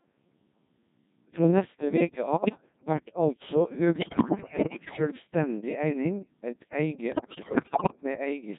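From start to finish the speech carries the Codec 2 vocoder sound: robotic, buzzy and heavily damaged. The decoder rebuilds the voice from pitch, voicing, energy and a coarse spectral envelope rather than the original waveform, and the degree of smearing fits a rate around 1.6 kbit/s. Consonant detail and natural voice texture are lost at that rate.

Bit errors on digital voice radio break in three times. The first runs from 2.37 to 2.66 s, between "neste veke" and "vert altså". The second runs from 3.96 to 4.99 s, just after "vert altså". The third runs from 7.12 to 7.96 s. At around 15 to 20 percent of bits flipped, the parameters of whole frames are corrupted. The voice lurches in pitch and level, changes tone colour, and dissolves into warbles and bleeping gibberish.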